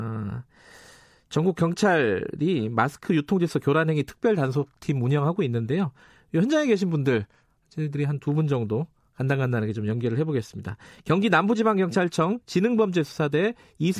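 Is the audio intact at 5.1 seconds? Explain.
Yes, the audio is intact at 5.1 seconds, with no audible fault at that moment.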